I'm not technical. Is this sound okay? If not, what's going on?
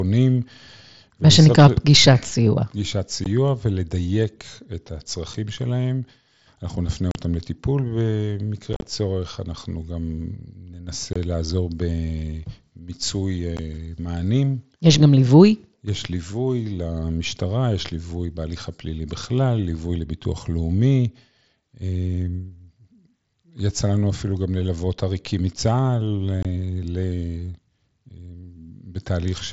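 No. The speech has short dropouts, which is unconcealed Bluetooth headset packet loss. Tiny chunks of audio travelling from the headset to the phone got lost, and silence or an idle pattern filled the gaps, so you hear sudden holes with hard edges. They're at 3.24, 5.34, 7.11 to 7.15, 11.13 to 11.16, 13.57 and 26.43 to 26.45 s. From 8.73 to 8.86 s several gaps come close together, so it sounds choppy and rough. The headset's mSBC link carries the rest of the speech.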